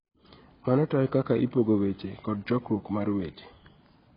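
Throughout the speech, nothing is heard above 5.1 kHz. The sound is dull and smeared, with a warbling or fizzy texture. The damage is heavy. The likely cause is AAC compression at a low bitrate, consistent with 16 kbps AAC-LC. The encoder cut the top band and coded the rest coarsely.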